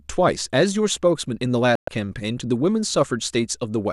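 Speech with a digital broadcast dropout from 1.75 to 1.88 s: the receiver lost valid frames and muted, leaving a hole of about 120 ms, consistent with roughly five dropped frames. On the waveform this is a flat gap; on a spectrogram, a blank vertical band across all frequencies.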